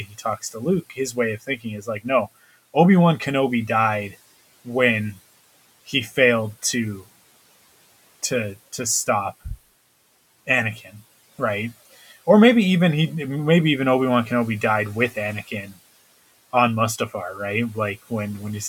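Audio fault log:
0.05–0.25 s, 0.82–1.17 s, 1.47–1.65 s, 1.82–2.06 s, 5.87–6.17 s: speech cut by the noise suppressor. The suppressor mistook parts of the speech for the room noise, which sits about 24 dB below it, and pulled them down by about 10 to 15 dB, so they sound swallowed. On a spectrogram these show as short dimmed patches, and on the waveform as brief dips in the envelope.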